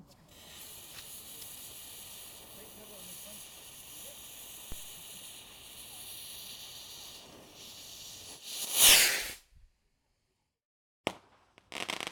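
At 4.72 s, a DC step. The zero line jumps about -30 dBFS, then decays through a 5 Hz high-pass. A low thump results.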